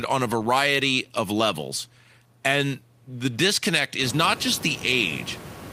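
No system faults are audible in the speech; the only change is the room's background noise rising by about 24 dB at around 4 s, which still sits about 16 dB below the speech and belongs to the recording itself.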